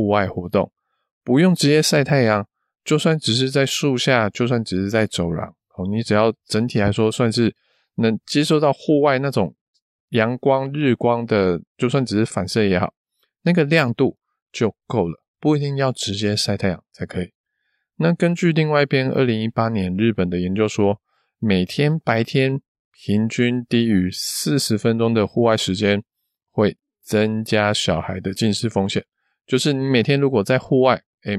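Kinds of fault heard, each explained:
No technical faults detected.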